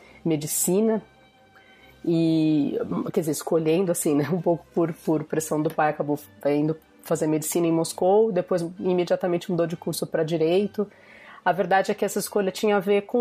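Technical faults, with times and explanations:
No technical faults can be heard anywhere in the signal.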